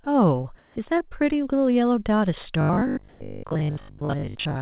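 Near the start, from 0.04 to 0.06 s, the sender's voice detector likely treated a bit of the sound as background and stopped sending. This is sound dropped by the voice detector. About 10 ms of real audio was lost, and the receiver filled 20 ms with synthetic noise. The result is a tiny gap where the sound briefly gives way to a flat hiss before it returns.

From 0.58 to 0.76 s, the sender likely paused transmission during a lull and the receiver generated comfort noise in place of the background for 180 ms. The real room tone, sitting about 32 dB below the loudest passages, is swapped for a steady, featureless noise. That noise is about 1 dB louder than what it replaces, so the pause sounds slightly hissier and smoother than the surrounding background.

At the end of that pause, from 0.74 to 0.76 s, the onset was clipped by the voice detector. The detector was likely slow to recognise that sound had resumed, so the first 20 ms were never sent and comfort noise stood in for them. 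The sound that follows starts abruptly, missing its soft beginning.

Between 1.08 and 1.25 s, there is short concealed packet loss. About 40 ms of audio never reached the decoder in time, and the receiver extended the preceding sound for 30 ms to cover the hole before blending back. This adds roughly 15 ms of invented material, heard as a brief smear or wobble rather than a clean gap.

From 2.61 s to the end, there is robotic sound from repeated short buffers. Fresh audio likely arrived too seldom, so the playback kept repeating the last short block, for most of this stretch, while the real audio was skipped. The repetition imposes a fixed buzz at 50 Hz, which fits a 20 ms buffer. The sound turns rigid and metallic while still loosely tracking its original shape.

Inside that stretch, from 3.09 to 3.21 s, comfort noise in place of the background appears again for 120 ms. This time the background sits about 28 dB below the loudest parts, and the synthetic fill is about 1 dB quieter, giving a brief patch of steady hiss with a different tone. 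Throughout the clip, nothing reaches above 4 kHz, consistent with a narrowband G.711-style call path.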